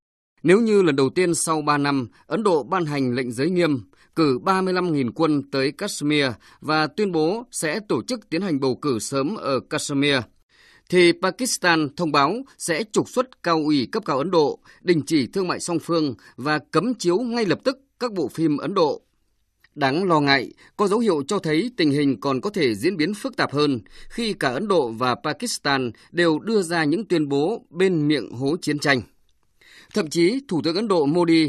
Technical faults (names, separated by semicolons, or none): none